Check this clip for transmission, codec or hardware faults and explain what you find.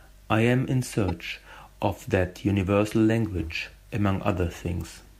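One fault stands out, a brief burst of damaged data in a compressed stream between 1.08 and 1.10 s. It sounds like a short chirp or squawk cutting across the speech, gone almost as soon as it starts. Part of the compressed data at that point was corrupted, so the decoder misread the affected frame, lost its place in the stream and had to hunt for the next valid frame header before clean decoding resumed.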